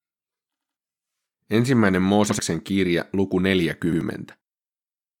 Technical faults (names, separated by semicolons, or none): repeated buffer